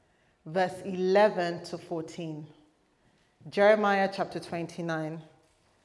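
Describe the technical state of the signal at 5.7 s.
At 5.7 s the signal is intact, with no audible fault at that moment.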